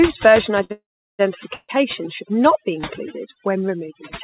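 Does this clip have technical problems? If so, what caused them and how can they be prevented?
Yes. Overdone noise removal affects the whole clip. The suppressor pushed down any frequency band near its noise estimate, and quieter parts of the speech went with it. The background drops and breaks up into twinkling, warbling specks. A spectrogram shows scattered twinkling specks and patchy, holed-out harmonics, all below 4 kHz, which fits the narrowband call path. To prevent it, lower the reduction strength or record in a quieter room.

A short stall from a late packet runs from 0.64 to 0.72 s. A packet missed its playout time and the jitter buffer ran dry, so the receiver held the last sound for about 56 ms and then carried on from the same point. The waveform shows a repeated cycle where the speech should move on. To prevent it, give the jitter buffer more headroom on connections where packets arrive unevenly.

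Call audio freezes occur from 0.72 to 1.28 s and from 1.53 to 1.71 s, the second just before "should not be". Each is likely caused by packets delayed in transit and an emptied jitter buffer. The receiver extended the last sound as it faded, then fell silent for about 370 ms in the first freeze and 30 ms in the second, before resuming where it stopped. Little or nothing is lost, but a gap has been inserted. On a waveform this looks like a decaying tail followed by a flat stretch. To prevent it, use a steadier network link and an adaptive jitter buffer that is allowed to grow.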